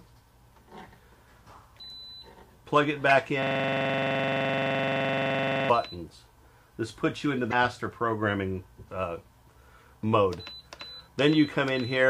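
Damaged data in a compressed stream appears first at 3.09 to 3.12 s as a brief glitch. Part of the encoded stream there was corrupted, so the decoder misread the affected frames, lost its place, and had to hunt for the next valid frame header before resuming. The same fault returns at 7.49 to 7.53 s as a similar short blip, where corrupted bytes again forced the decoder to resynchronise.

A system hang loop runs from 3.43 to 5.70 s. The computer or its audio driver stalled while the sound hardware kept replaying one ring buffer, so a single 42.7 ms slice of sound repeats about 53 times in a row. At roughly 23.4 repeats per second it becomes a rapid stutter, like a machine gun. The loop length fits a 2048-sample buffer.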